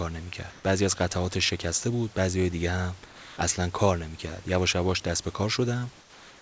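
In three pauses in the speech, at 0.50 to 0.64 s, 3.06 to 3.38 s and from 6.00 s to the end, the room background gives way to a flat, featureless hiss, about 1 dB louder in the first gap and about 3 dB and 4 dB quieter in the others, with nothing above 8 kHz. This is likely comfort noise in place of the background, synthesized by the receiver while the sender paused transmission during silence.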